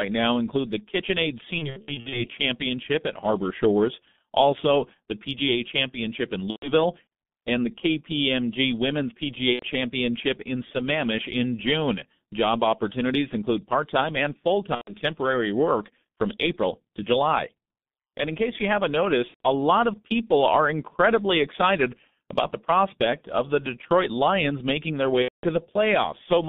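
G.723.1 codec coding runs through the whole recording. At about 6.3 kbit/s this early internet-telephony coder packs the speech into 30 ms frames and rebuilds it from a sparse, slowly updated vocal model. The line band of roughly 150 Hz to 3.6 kHz strips the highs, and the codec damage is heavy, so the voice comes across muffled and hoarse, with consonants smeared.

VoIP packet loss concealed by the speech codec breaks in six times: 1.58 to 2.30 s, 6.50 to 6.73 s, 9.53 to 9.65 s, 14.75 to 14.97 s (after "part time and full", before "work from"), 19.28 to 19.40 s (after "in case you haven't", before "a lot of people"), and 25.22 to 25.46 s (after "making their"). Where packets vanish, the decoder extends the last pitch and filter at falling gain, producing a fading buzz. The first stretch scatters about 270 ms of loss over roughly half a second, fitting nine missing frames.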